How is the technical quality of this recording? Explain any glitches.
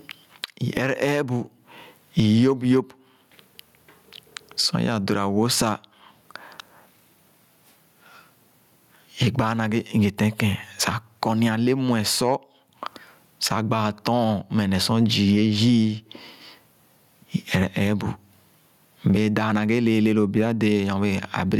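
The recording has one fault, gain pumping, and it runs through the whole clip. The input gain was likely set far too high, so a fast limiter clamps down on every loud syllable and releases in the pauses, swinging the level by around 25 dB. The speech comes out squashed and flat in dynamics.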